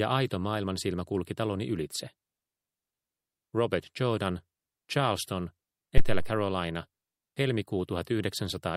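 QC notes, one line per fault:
5.98–6.39 s, phantom power thump. A deep, low thump hits and peaks at about -7 dBFS. It dies away with a decay of roughly 93 ms. Supply voltage switched on a live input. The step passes through the coupling capacitors as a low-frequency pulse.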